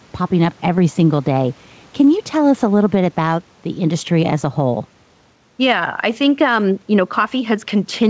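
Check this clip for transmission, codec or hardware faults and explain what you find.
Gain pumping runs through the whole clip. The background swells in each pause and ducks under loud speech by roughly 5 dB, likely from excessive mic gain with a fast limiter pulling it down. On a waveform, the noise floor rises between phrases. The spectrogram shows the quiet room noise, about 38 dB below speech, brightening in gaps beneath the 8 kHz ceiling.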